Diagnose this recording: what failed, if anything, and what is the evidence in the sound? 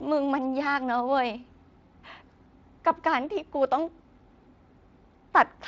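Nothing failed here: the speech has come through Speex at a fairly generous setting, which fits a rate of around 24 kbps, and the light touch that leaves on the sound is just that codec doing its normal job rather than anything gone wrong.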